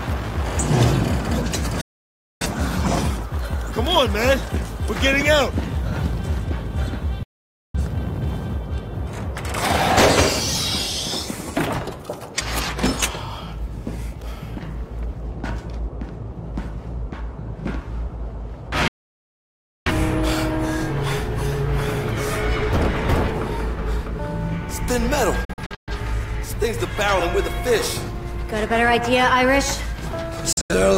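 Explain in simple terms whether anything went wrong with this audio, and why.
The sound repeatedly cuts cleanly to silence. This is a digital broadcast dropout: the receiver lost the signal and muted. Gaps come at 1.81, 7.23 and 18.88 s, lasting half a second to a second, with clusters of brief holes at 25.45 and 30.53 s. Unlike crackly interference, there's no noise, and the missing sound never returns.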